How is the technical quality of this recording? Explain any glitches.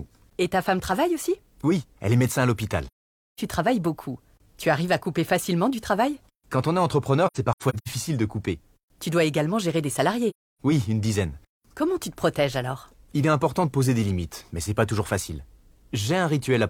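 Technical quality suffers from three dropouts. AAC frame loss with muting occurs at 2.87–3.40 s, 7.27–7.88 s and 10.30–10.61 s. Lost frames were zeroed by the decoder, and overlapping windows fade the sound out and back in, leaving soft-edged silent holes. The second gap is broken into short silences, the longest about a tenth of a second.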